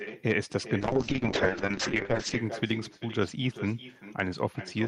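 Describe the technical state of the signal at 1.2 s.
At 1.2 s you're right in the middle of a call bitrate drop that runs from 0.81 s to 2.43 s. The coding turns coarse and the top end gets cut, so the speech sounds muffled and a bit watery, which fits the encoder falling from around 32 kbps to something near 7 kbps.

Running through that same moment, and the whole clip, is echo with no canceller. The far end's loudspeaker leaks back into its mic, so every bit of the talker's speech returns roughly 400 ms later as a thinner copy about 14 dB down.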